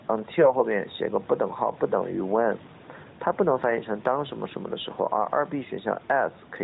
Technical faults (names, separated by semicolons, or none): gain pumping; AMR bit errors